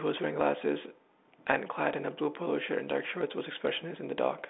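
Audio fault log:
No faults logged; the speech sits in a telephone band of about 250 Hz to 3.7 kHz with nothing above 3.9 kHz, consistent with a G.726 ADPCM path running at 40 kbit/s.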